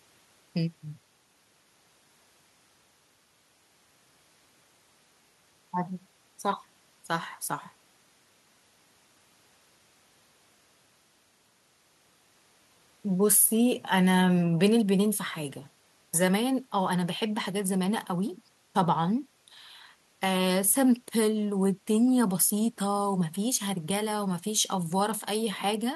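Listening to the speech recording, nothing stood out as a technical problem at any point.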